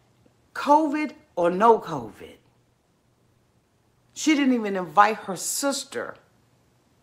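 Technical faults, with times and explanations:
1.43 to 4.15 s, call bitrate drop: the sound goes rough, watery and dull, as if the top end has been shaved off, which fits the encoder being squeezed from something like 128 kbps down to around 19 kbps. The call's bandwidth estimate fell, so the codec had far fewer bits to spend and had to code everything much more coarsely. It stays at that low point for about 2.7 s before the bitrate climbs back and the detail returns.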